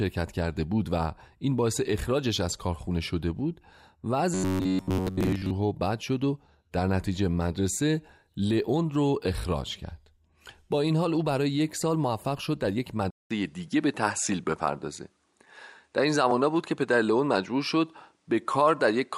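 From 4.34 to 5.51 s the speech turns into a rigid, metallic buzz at 93.8 Hz. This is robotic sound from repeated short buffers. Audio likely arrived too seldom. Slices of about 10.7 ms were looped in its place, covering most of this stretch.

At 13.11 s there is a 200 ms silence. Then the input switched to a poorer device, likely a different microphone or headset profile. The band narrows, so the sound turns duller. New background noise sits about 45 dB below the speech. The level stays about the same through the end.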